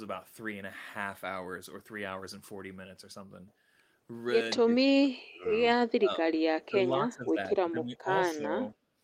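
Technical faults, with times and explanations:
4.6–5.5 s, 5.94–6.35 s, 6.58–6.89 s, 7.05–8.1 s and 8.35–8.75 s: speech suppressed in double talk. The speech repeatedly sinks, by about 30 dB in the first three spans, about 20 dB at 7.05 s and only about 10 dB in the last, so parts break up or vanish for most of each span. This is likely an echo canceller that could not separate this talker from loudspeaker echo while the far side spoke, and turned both down.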